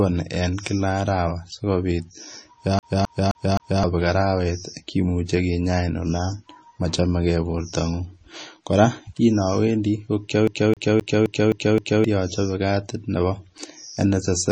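A speech recording carries two faults. Its whole length shows signs of likely MP3 compression at a very low rate, around 26 kbps: starved of bits, the encoder has discarded everything above 9.3 kHz and dropped quieter frequency components that come and go between frames. The result is dull, band-limited speech with a watery, swirling texture, metallic chirping on sibilants, and consonant onsets smeared rather than crisp. Layered on top is the CD stuck on one turn fault, where a scratch sends the laser back to the same spot on each rotation. From 2.79 to 3.84 s the same 0.26 s fragment plays four times in a row, and from 10.47 to 12.04 s that same 0.26 s length repeats six times, each jump marked by a brief mute. The effect is a rapid, evenly spaced stutter.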